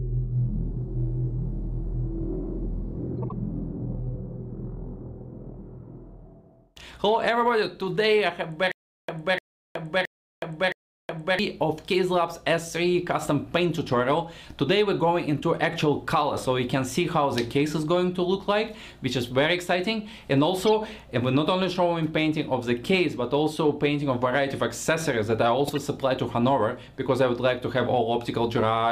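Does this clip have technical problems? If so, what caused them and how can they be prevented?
Yes. Corrupt frame decoded: flipped bits in compressed frames were decoded anyway, throwing energy to wrong frequencies, heard as brief chirps or noise bursts at 3.18–3.32 s (about seven frames), 20.66–20.68 s and 25.67–25.77 s. Checksums on each frame, with concealment or dropping of frames that fail, would prevent this.

Stutter with silent gaps: a stalled stream, likely, replayed its last 300 ms fragment four times between 8.72 and 11.39 s, each followed by 369 ms of digital silence, losing the audio in between. Larger buffering and retry logic that resumes rather than repeating would prevent this.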